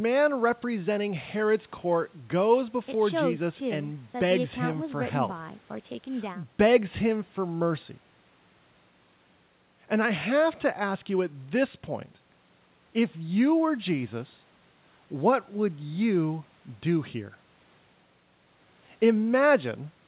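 No technical faults can be heard in the speech, which arrives through a call path whose G.711 A-law coding at 64 kbps leaves nothing above 4 kHz, the narrow telephone band expected of that codec.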